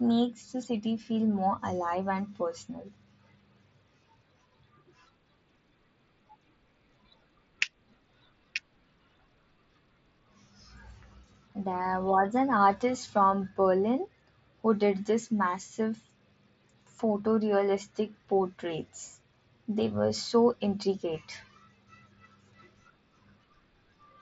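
This speech clip comes through a Bluetooth mSBC headset link, and there's nothing technically wrong to point out here.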